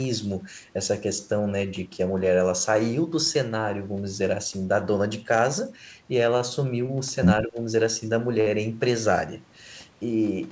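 Short stalls from late packets occur at 6.38 to 6.42 s and 6.86 to 6.91 s. Each time a packet arrived late, the jitter buffer ran dry, and the receiver held the last sound for about 16 ms and then 23 ms before resuming exactly where it stopped. Nothing is lost, but the speech briefly sticks with a faint buzz or dip.

Speech suppressed in double talk follows at 7.41 to 7.58 s. The talker dips by roughly 15 dB over about 150 ms. The likely cause is an echo canceller that could not separate this talker from the far side's loudspeaker echo and turned both down.

A third, longer late-packet stall at 8.41 to 8.48 s holds the sound for about 55 ms before playback picks up without a gap. Throughout, the band stops at 8 kHz, which fits a wideband call codec such as G.722.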